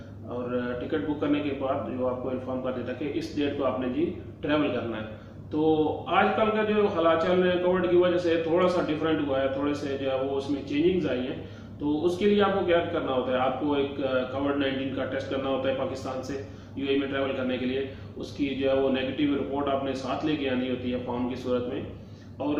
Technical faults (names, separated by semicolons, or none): none